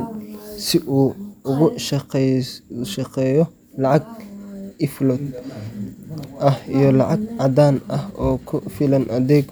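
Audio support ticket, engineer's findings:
Nothing to flag here; the speech comes through steady from the first moment to the last, with no dropouts, glitches or level jumps turning up anywhere along the way.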